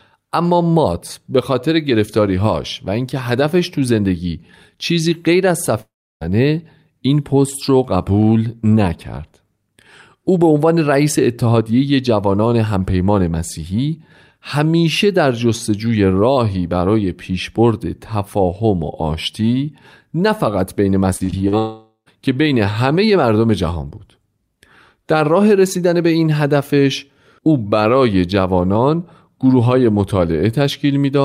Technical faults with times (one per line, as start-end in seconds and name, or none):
5.81-6.23 long network dropout
21.17-21.54 repeated packet loss (robotic sound)
21.58-22.08 long network dropout